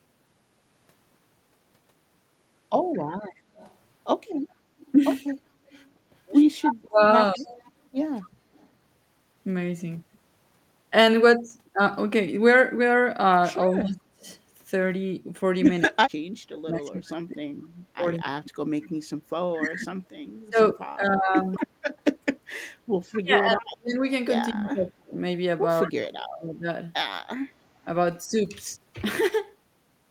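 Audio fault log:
2.93–8.68 s and 14.22–25.89 s: echo leak. A faint copy of the speech trails the original by 215 ms, well below it but audible. It is likely a far-end loudspeaker whose echo canceller let part of the returning signal slip back.
5.45–7.57 s and 13.67–26.67 s: speech suppressed in double talk. The speech dips deeply in pieces when both sides talk at once, for about half a second in the first stretch and about five seconds in the second. The likely cause is an echo canceller turning down the talker along with the echo.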